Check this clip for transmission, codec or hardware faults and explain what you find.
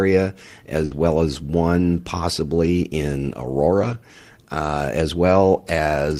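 The speech has two transmission faults, both from lost packets.

From 0.85 to 0.93 s there is a burst of packet loss. The receiver filled 60 ms by extending the last sound and fading it, which gives a held buzz or fading hiss, and 60 ms of speech never arrives. On a spectrogram, the harmonics go flat and smeared, then fade before normal speech resumes. The waveform shows a repeating, shrinking pattern and then a jump.

At 0.91–0.93 s and again at 1.09–1.11 s, a lost packet was rebuilt from error correction. Each 20 ms frame was replaced by the low-bitrate copy carried in the next Opus packet, so there is no gap, only a brief rough, noisier patch. A spectrogram shows a 20 ms strip with blurrier harmonics and more noise between them. In the waveform the patch looks continuous but grainier.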